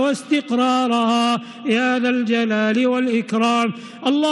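Nothing goes wrong anywhere in this one; there's no fault to point to from the first moment to the last.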